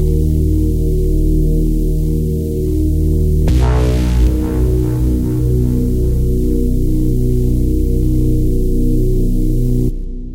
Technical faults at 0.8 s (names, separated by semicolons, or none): none